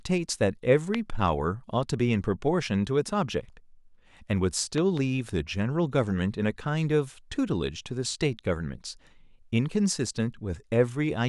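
At 0.95 to 0.97 s a single loud pop lands on top of the speech, peaking roughly 15 dB above it. From 4.78 to 4.99 s a second loud pop event gives two pops in quick succession, roughly 10 dB above the speech. The likely cause is a sudden voltage step or pulse, such as a connector, switch or static discharge, entering the signal path. It is heard as a sharp thump while the speech continues underneath.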